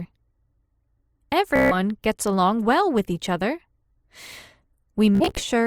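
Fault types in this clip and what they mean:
Bluetooth stutter: lost or late packets make the receiver repeat its last slice, a buzzy stutter at 1.56–1.75 s and 5.15–5.42 s, then sound skips ahead.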